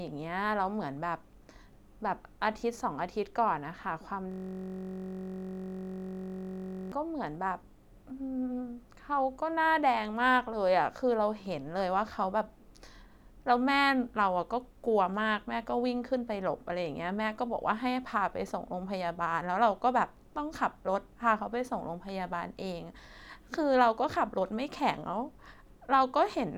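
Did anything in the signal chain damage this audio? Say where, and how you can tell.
Yes, a system hang loop at the driver/buffer stage, from 4.32 to 6.92 s. A 21.33 ms slice repeats over a hundred times, giving a steady 46.9 Hz buzz. That fits a 1024-sample ring buffer replaying while the driver froze.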